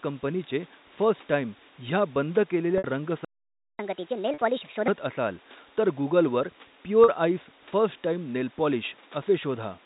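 At 2.78 s there's packet loss with pitch repetition: about 60 ms of audio went missing, and the receiver looped the last pitch period, so you hear a brief buzzy hold. At 3.25 s the output just goes dead for about 0.54 s, a playback stall, likely the player running dry of data. From 3.79 s to 4.88 s it catches up at higher speed, resampled to 1.5x, so everything sounds hurried and roughly seven semitones sharp. Two more short losses, each about 40 ms, land at 4.34 s (inside that fast stretch) and 7.04 s, each bridged with the same held buzz.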